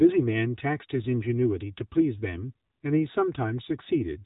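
From the start, one channel runs about 3 ms behind the other, and summing them to mono causes channel delay comb filtering: evenly spaced notches from roughly 200 Hz up leave the speech hollow and phasey. The whole clip also has AMR narrowband mobile codec damage. Nothing gets through above 3.8 kHz, and the plainly buzzy, synthetic quality suggests a low bitrate around 8 kbps.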